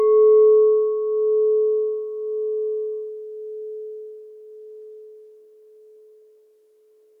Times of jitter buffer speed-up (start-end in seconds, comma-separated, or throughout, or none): none